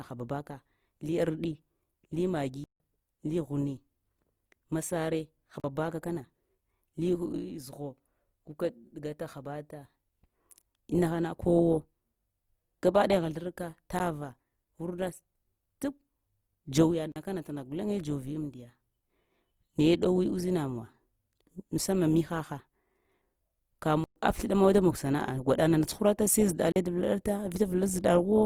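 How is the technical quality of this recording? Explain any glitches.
The recording has two problems: audible codec grain across the whole clip, and six short dropouts.

Throughout, the speech has a rough, grainy, noisy texture, though the bandwidth stays full, reaching about 20.4 kHz. That's likely Opus compression in its music (CELT) mode at a low rate, around 24 kbps. When bits run short it fills bands with folded or noise content, so the detail turns grainy.

There are blocks of digital silence at 2.64 s (160 ms), 5.60 s (40 ms), 13.99 s, 17.12 s (40 ms), 24.04 s (120 ms) and 26.72 s (40 ms). The sound cuts out and back without any fade. The 13.99 s gap is only about 12 ms, so it comes across as a tick rather than a hole. The cause is either the output buffer not being filled in time or a calculation producing invalid values.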